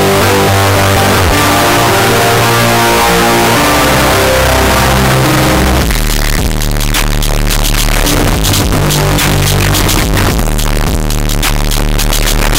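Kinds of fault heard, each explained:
Signed and unsigned mixed up: throughout, the sound is buried in very loud, harsh distortion, with quiet stretches as loud as the rest. The likely cause is 8-bit samples read with the wrong sign convention, which flips the top bit so every zero crossing jumps full scale.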